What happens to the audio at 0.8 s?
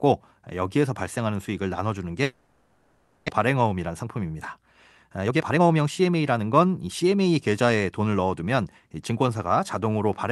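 Nothing goes wrong at 0.8 s; the speech passes through intact there, with only the ordinary coding character of the call path.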